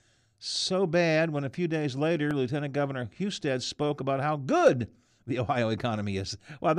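At 2.31 s, new audio arrived late, so the device replayed its last block once, a repeated buffer of about 1.45 ms (fitting a 64-sample buffer), heard as a brief click in the speech.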